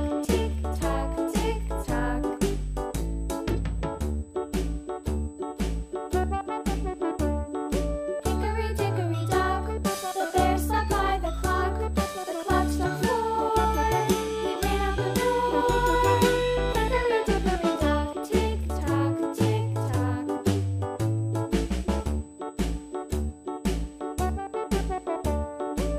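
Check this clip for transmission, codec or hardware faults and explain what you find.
One hardware fault runs through the whole clip. USB whine: current drawn in the bus's 125 microsecond microframes leaks into the audio path, adding a steady fixed 8 kHz tone around 35 dB below the main sound.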